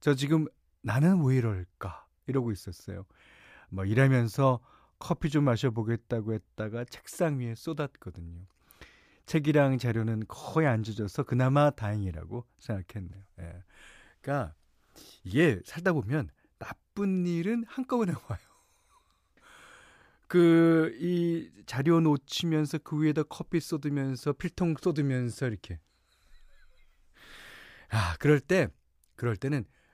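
No technical faults can be heard anywhere in the speech recording; the signal stays continuous and steady throughout, with no breaks, level disturbances or added noise.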